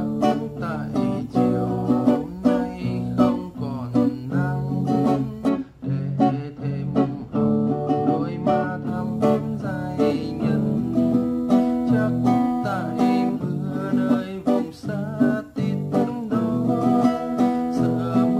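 From 5.49 to 8.87 s, de-emphasis was applied wrongly, cutting treble the audio never had boosted; about 11 dB down at 10 kHz, it sounds dull and muffled.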